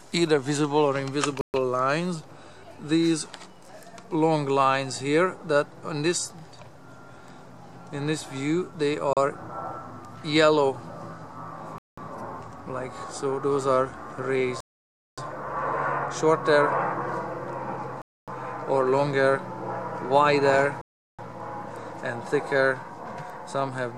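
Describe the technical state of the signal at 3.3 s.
At 3.3 s the signal is intact, with no dropout, clipping, distortion or other technical fault to be heard.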